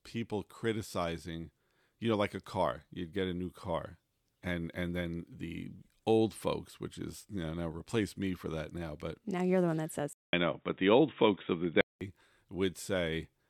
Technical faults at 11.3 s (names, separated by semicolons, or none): input switched to a poorer device